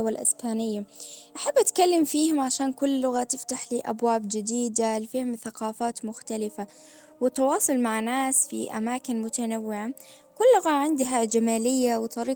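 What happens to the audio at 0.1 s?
At 0.1 s the speech plays through intact, with no dropout, click or distortion at that moment.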